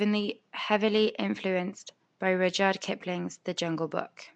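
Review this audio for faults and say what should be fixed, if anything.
The speech was most likely passed through Nellymoser compression, the old Flash microphone codec, for the whole of the clip, and the damage is plainly audible. It codes short blocks with a fixed, small bit budget, so weak frequency bands get nothing and are refilled with noise. That leaves a rough, hissy halo around the speech and a smeared, underwater quality, with a coarseness that fits a stream of around 44 kbps. The faint room noise, about 45 dB below the speech, is part of the recording rather than a fault. To prevent this, capture and deliver the audio with a modern codec such as Opus or AAC at a suitable bitrate instead of Nellymoser.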